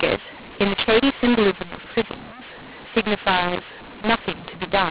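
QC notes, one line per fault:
Throughout, mu-law and A-law mixed up: mu-law speech decoded as A-law scrambles sample levels, causing harsh distortion and lifting quiet samples so pauses fill with noise.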